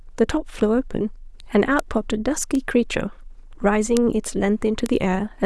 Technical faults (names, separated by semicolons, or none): bit error spike